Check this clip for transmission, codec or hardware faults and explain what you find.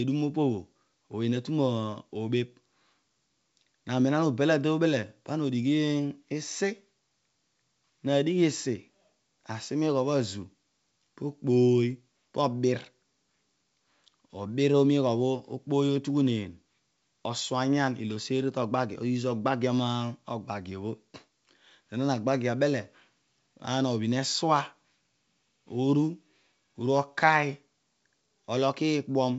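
No faults found here.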